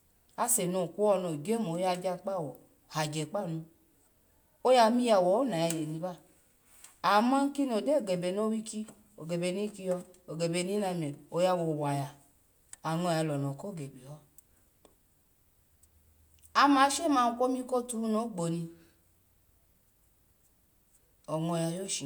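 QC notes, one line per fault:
No faults found on this speech clip; nothing to log.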